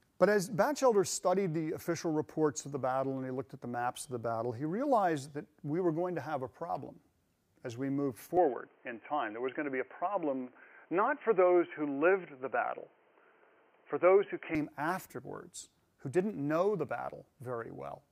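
From 8.37 to 14.55 s the audio turns dull and boxy with nothing above 3.2 kHz, a level shift of roughly 5 dB and faint new noise, likely an input switched to a poorer device.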